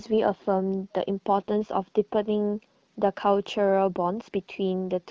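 No technical faults occur anywhere in the speech, which is carried over an AMR wideband (HD Voice) link that sounds clear.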